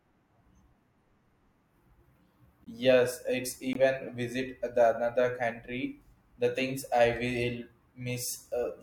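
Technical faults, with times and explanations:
2.64–2.68 s and 3.73–3.75 s, just before "visit the another country": corrupt frame muted, one rejected compressed frame replaced by silence, an abrupt flat gap with blank spectrogram columns, timing unchanged.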